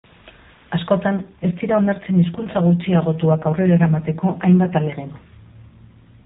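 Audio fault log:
1.15–5.00 s, AMR rate drop: speech turns rougher and more synthetic at an unchanged narrowband width with no gap, consistent with the codec falling from 12.2 to 5.9 kbps.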